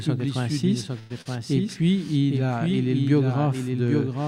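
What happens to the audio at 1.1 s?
Between 0.99 and 1.20 s a call audio freeze interrupts the sound. Packets were likely held up and the jitter buffer emptied, so the receiver stretched the last sound into a fading buzz or hiss for about 108 ms. The audio then resumes where it stopped, with nothing lost.

A doubled audio track also runs through this moment. A full-band copy sits about 0.7 s behind the original, roughly 5 dB quieter, with no decay or room colour. This is likely caused by a second, slower capture path mixing in alongside the first.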